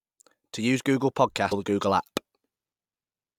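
At 1.51 s a brief chirp, squawk, click or short hole cuts into the speech: damaged data in a compressed stream. Corrupted bytes made the decoder misread a frame and lose sync.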